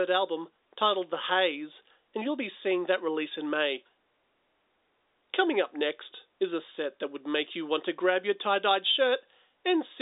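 Speech, with nothing technically wrong anywhere in it.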